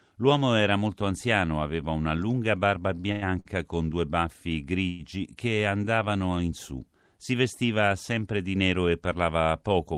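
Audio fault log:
2.95–3.47 s, repeated stalls (stutter): within this half second the playback runs dry four times. Each time the receiver extends the last sound rather than going quiet, filling about 197 ms in total, with the longest stall 97 ms. That is roughly 38% of the span. Because packets were arriving more slowly than they were played, the jitter buffer kept emptying. Nothing is lost, but the sound drags and catches.
4.89–5.01 s, call audio freeze: the sound stops moving forward for about 102 ms and is held as a continued, smeared tail of the last moment instead of dropping to silence. The likely cause is packets held up in transit, which let the jitter buffer run empty. When they arrive, playback resumes exactly where it paused. The whole stream ends up about 102 ms later, with nothing missing.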